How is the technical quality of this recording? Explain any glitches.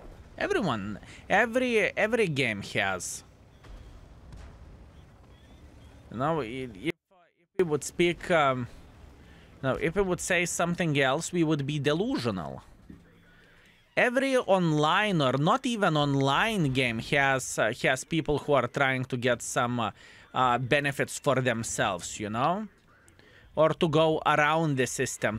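One glitch: an audio dropout to a faint residue from 6.90 to 7.59 s. The signal path likely lost its feed for about 0.69 s while the chain after the break stayed live. The sound cuts out abruptly, leaving only a faint leak roughly 40 dB below normal level, then snaps back rather than fading.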